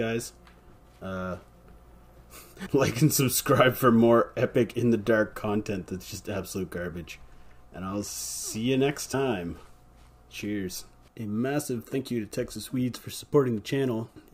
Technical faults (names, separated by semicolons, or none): compressed frames skipped